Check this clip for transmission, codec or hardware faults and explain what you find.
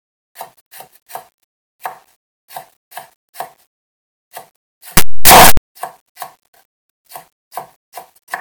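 One fault, from 4.97 to 5.57 s: signed and unsigned mixed up, likely because the 8-bit samples were read with the wrong sign convention. That flips the top bit, turning every zero crossing into a full-range jump, so the sound becomes very loud, harsh distortion with quiet parts as loud as the rest.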